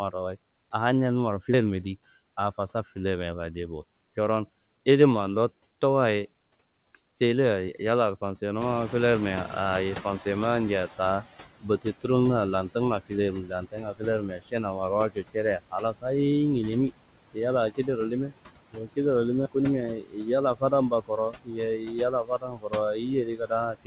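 Speech recording in which the background noise sinks between phrases and swells back under the talking. These are noise suppressor artifacts, from a suppressor cutting the noise by about 18 dB frame by frame across the whole clip. At 1.54 s there is an abrupt jump in the sound and no gap of silence, as if roughly a tenth of a second were skipped. The likely cause is a dropped buffer (overrun): samples were overwritten before being collected, and the two sides were joined directly. Around 8.5 s the room noise steps up by about 16 dB, and from 8.61 to 11.28 s it comes through louder before settling. This is the noise suppressor catching up: its estimate took about 2.7 s to adapt, reaching about 13 dB of reduction. Speech cut by the noise suppressor then makes stretches of speech sound swallowed or faint, at 11.61–11.94 s (just before "lantunga filermi"), 13.44–14.54 s (just after "lantunga filermi"), 15.1–16.05 s (just before "nginimi yalla kida"), 18.72–18.97 s, and from 20.01 s to the end. 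The suppressor mistook quieter speech for noise and pulled it down by as much as about 16–18 dB. Over the call path the audio has no content above 4 kHz, consistent with G.711 A-law coding.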